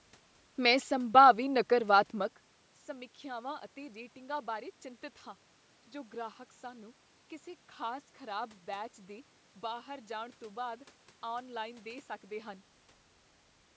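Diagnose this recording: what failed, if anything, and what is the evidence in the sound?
Nothing stood out on listening to this speech recording, which carries only the expected traits of a call microphone path with its bass trimmed and nothing above 8 kHz, room noise, and level shifts around 2 s and near 12.5 s where the talker moved relative to the microphone.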